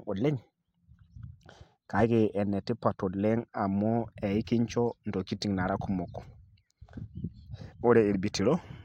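No technical faults can be heard anywhere in this recording.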